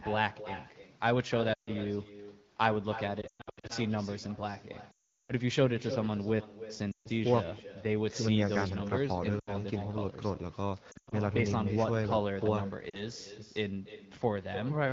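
From the first syllable to the end, every phrase of this speech has a fainter ghost trailing it by roughly a third of a second, sitting about 12 dB under the direct sound and sounding thinner. That's echo with no canceller: the far end is on a loudspeaker, its mic picks the call back up, and nothing strips it out before it returns to you.

On top of that there are lost AMR speech frames at 1.53 to 1.70 s, 3.22 to 3.72 s, 4.91 to 5.33 s, 6.91 to 7.09 s, 9.39 to 9.57 s, 10.91 to 11.14 s, and 12.90 to 13.03 s. When frames fail to arrive intact, the decoder keeps replaying its last good pitch and vocal tract settings at falling gain. So even the short gaps drop to near silence within two frames, while the 4.91 s stretch (about 380 ms of loss) stays near silent before the voice recovers a bit rough. The 3.22 s and 10.91 s patches are choppier, with scattered losses whose longest runs are 120 ms and 100 ms. 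Underneath all this, the wideband AMR at 12.65 kbit/s carries the speech with full HD Voice bandwidth.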